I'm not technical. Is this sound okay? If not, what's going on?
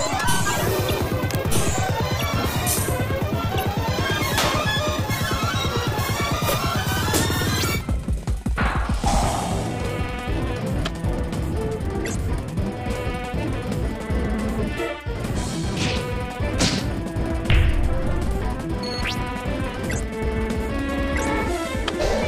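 No. From the start until about 7.8 seconds, the audio runs too fast and too high, like a tape on fast-forward: everything is hurried and pitched up by roughly ten semitones, close to an octave. This is a section at the wrong speed, playing about 1.73 times faster than normal. Speed and pitch rise together here, which most likely comes from that stretch being played or edited against the wrong clock. After 7.8 seconds the speed drops back.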